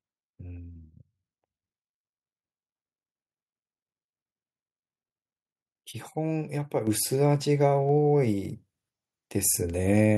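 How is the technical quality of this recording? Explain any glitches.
One glitch stands out: a microphone volume step-up at 6.87 s. The call software judged the input too quiet and raised the device's microphone gain in a single jump of about 7 dB, so the speech and the background noise suddenly get louder together, mid-recording.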